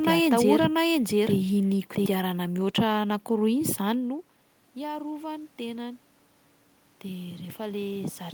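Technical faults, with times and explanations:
4.74 to 6.09 s and 7.03 to 8.34 s, automatic gain rising: after the talker moves away from the microphone at around 4 s, the input falls by about 14 dB. The automatic gain control reads this as too quiet and slowly turns itself up, by about 3 dB over the first span. The voice and the room noise swell together over more than a second. The second span repeats the same creep and is still rising when the clip ends.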